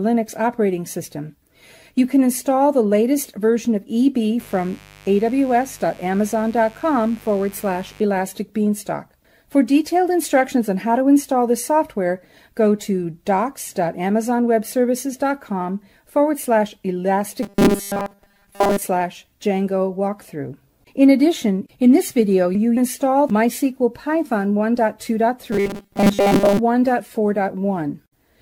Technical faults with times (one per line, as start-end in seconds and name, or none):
4.39-8.00 mains buzz
17.43-18.84 robotic sound from repeated short buffers
25.52-26.59 robotic sound from repeated short buffers